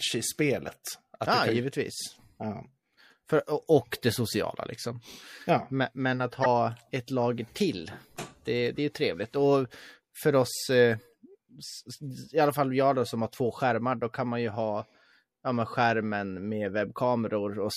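Throughout this speech clip the sound is watery and swirly, with dulled treble, metallic chirping on s sounds and smeared consonant onsets. The cause is likely MP3 compression at a low bitrate, plainly audible and consistent with about 64 kbps, where the encoder cuts the top end and lets weak frequency lines flicker on and off. From 6.43 to 6.46 s a brief glitch breaks the flow. That is damaged data in a compressed stream: the decoder misreads the corrupted frames, loses sync and jumps to the next valid frame header.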